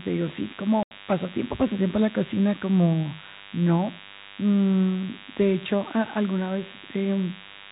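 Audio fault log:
throughout DECT cordless phone buzz: A nearby DECT handset or base station sends a short radio burst every 10 ms, and the audio circuitry rectifies it into the signal. The result is a thin, steady 100 Hz buzz with many harmonics, roughly 20 dB below the speech.
0.83–0.91 s packet loss filled with silence: Packets went missing in transit and the receiver played silence in their place, leaving an 80 ms hole in the speech, which fits eight 10 ms packets. The signal stops and restarts with hard edges at the gap.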